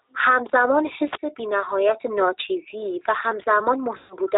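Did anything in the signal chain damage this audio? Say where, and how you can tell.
Yes. Throughout, the speech sounds band-limited, slightly rough and synthetic, with nothing above 4 kHz. This is codec-stage damage from the G.729 codec at 8 kbit/s, which rebuilds speech from a vocal tract model, a pitch predictor and a few pulses per frame.

From 3.98 to 4.17 s the speech smears into a buzzy tone or coloured noise that fades, and recovers weakly. This is network-stage VoIP packet loss concealed by the speech codec: about 120 ms went missing, which fits four lost packets. The decoder extrapolated its last pitch and filter at decaying gain.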